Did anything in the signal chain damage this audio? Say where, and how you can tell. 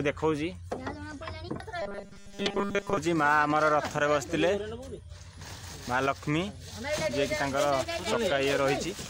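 Yes. From 1.82 to 2.97 s the sound turns into a rigid robotic buzz at 200 Hz, robotic sound from repeated short buffers, likely a starved driver buffer re-playing a 5 ms block. A spectrogram shows evenly spaced 200 Hz harmonics, and the waveform shows identical repeating cycles over most of the span.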